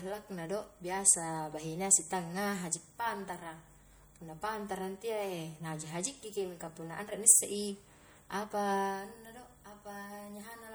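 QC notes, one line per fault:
Throughout, MP3 compression: the speech has a plainly audible watery, swirling texture with chirpy s sounds, likely from an encoder starved of bits, which fits a low bitrate around 64 kbps, switching weak frequency lines on and off between frames.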